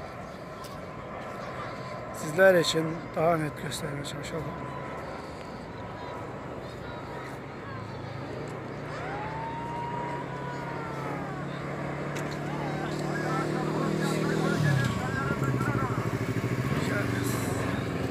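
Nothing stood out as a technical problem on listening.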